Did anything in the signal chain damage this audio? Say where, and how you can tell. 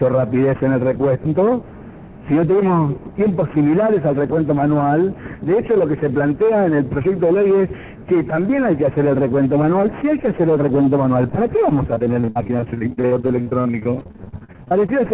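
Yes, at the network stage: repeated packet loss from 11.94 to 14.9 s. Dozens of gaps up to 60 ms are patched by repeating sound, so about a third of that span is concealed, and it sounds robotic.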